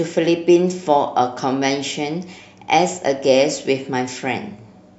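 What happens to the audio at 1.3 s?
Nothing goes wrong at 1.3 s; the speech carries on intact through that moment with no dropout, click or distortion.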